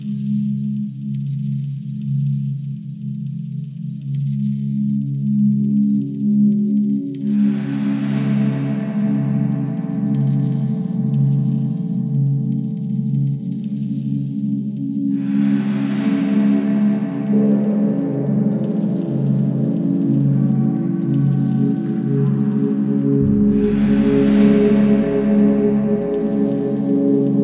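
No technical fault can be heard anywhere in the audio. Nothing in the playback calls for a timestamp or an explanation of something going wrong.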